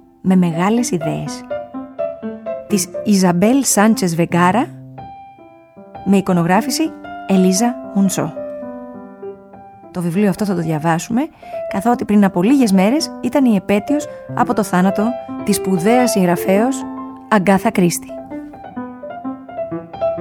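No technical faults can be heard anywhere in this recording.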